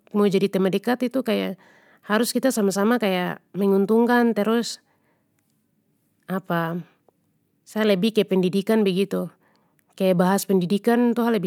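Throughout the speech, sample clock jitter adds a faint grainy hiss. The converter's clock wanders by around a microsecond, so samples land slightly off time, leaving an error roughly 45 dB below the signal. Unlike steady background hiss, it swells on loud, bright sounds and vanishes in pauses.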